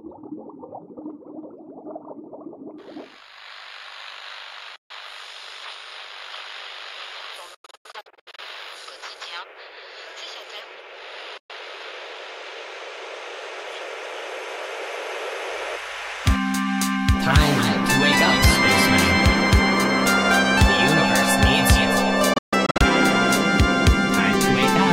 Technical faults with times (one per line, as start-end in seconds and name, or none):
4.76-4.91 Bluetooth dropout
7.54-8.40 Bluetooth dropout
11.37-11.51 Bluetooth dropout
22.33-22.82 Bluetooth dropout